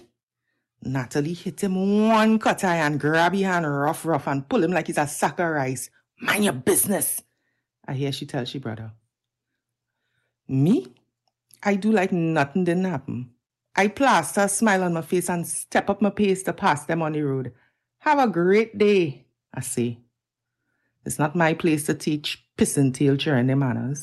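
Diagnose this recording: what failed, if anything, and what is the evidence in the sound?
Nothing failed; the speech sounds intact after the call path.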